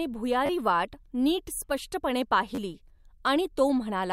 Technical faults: repeated buffer

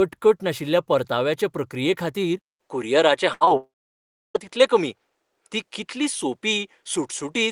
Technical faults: input switched to a poorer device; burst of packet loss; short concealed packet loss; long network dropout

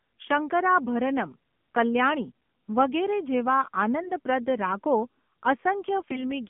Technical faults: AMR narrowband mobile codec; AMR bit errors

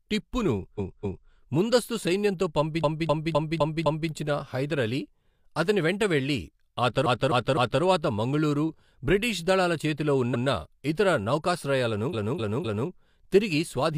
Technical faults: repeated frames

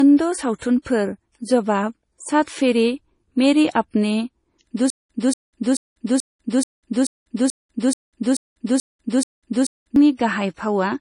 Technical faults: low-bitrate audio saved at a high bitrate; stutter with silent gaps

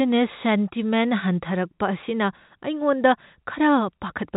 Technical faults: none

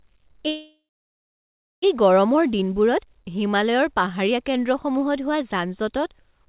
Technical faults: call audio freeze

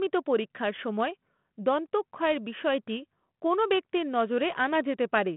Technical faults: none

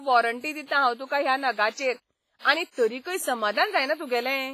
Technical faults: WMA compression

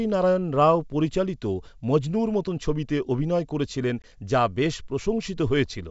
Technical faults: packet loss on an ADPCM call

